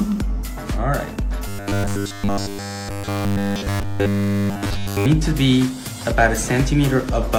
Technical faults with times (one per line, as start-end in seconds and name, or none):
1.48-5.06 robotic sound from repeated short buffers